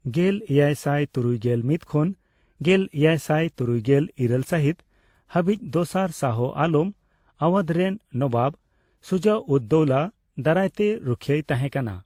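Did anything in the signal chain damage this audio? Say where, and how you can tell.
Yes, at the codec stage: the speech carries layered, mismatched artefacts throughout, with nothing above 20.1 kHz, which points to likely transcoding between lossy codecs, each re-encoding the last one's damage.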